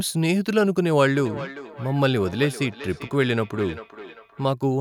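From 1.12 s to 4.55 s, feedback echo between two devices: a second device on the same call replays this speech, the microphone picks it up again, and each phrase returns roughly every 0.4 s, thin and ringing, peaking about 14 dB below the speech. A spectrogram shows faded copies of each syllable at that regular spacing.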